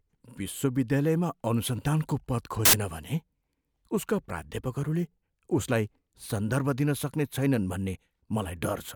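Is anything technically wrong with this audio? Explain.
Yes. From 2.65 to 2.73 s, samples are built from the wrong bytes: the low, fast-changing bits end up as the large part of each value. The speech becomes a brief burst of loud, harsh broadband noise.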